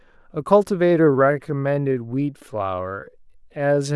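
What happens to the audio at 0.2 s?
Nothing goes wrong at 0.2 s; the audio is intact at that moment.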